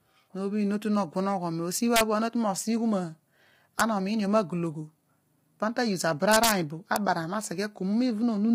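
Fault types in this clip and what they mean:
Low-delay AAC compression: The speech sounds rough and grainy throughout, with noise filling the gaps between harmonics and nothing above 15.6 kHz. This likely comes from heavy AAC-ELD coding, whose short frames resolve pitch poorly, which fits a low bitrate around 24 kbps.
Integer overflow: Violent cracks, far harsher than clipping, hit at 1.96–2.01 s, 3.8 s, 6.32–6.51 s and 6.96 s. At each, the loud peaks, pushed only about 0 to 2 dB past full scale, wrapped to the opposite sign instead of being limited.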